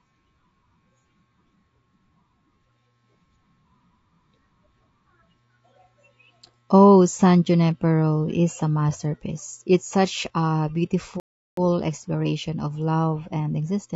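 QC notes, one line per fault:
Throughout: low-delay AAC compression. The likely cause is an AAC-ELD encoder running near 32 kbps. Its short frames resolve pitch harmonics poorly and leave too few bits, so the speech sounds plainly rough and grainy, with noise filling the gaps between harmonics and a thin, synthetic top band.
11.20–11.57 s: playback stall. The player likely ran dry of data or had its thread blocked, so output went silent for about 0.37 s. The speech halts abruptly after "such a" and resumes with "exploration of love", which makes an unnatural gap in the phrase.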